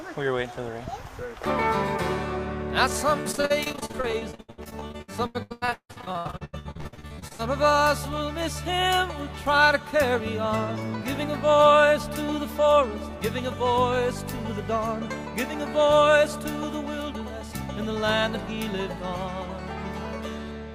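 Repeated packet loss (robotic sound) runs from 3.21 to 7.47 s: dozens of short dropouts, the longest 160 ms, leave about half that stretch patched by stretching the preceding sound, giving a choppy texture with fragments of the audio missing.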